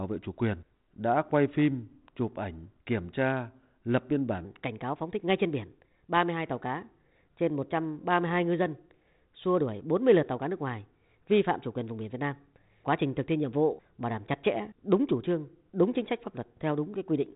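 From 4.45 s, just after "kiểm tra lập biên", the section plays at the wrong speed until the end. It runs 1.22 times too fast, raising pitch about three semitones. Speech sounds hurried and high within the telephone-narrow band. A playback clock mismatch is the likely cause.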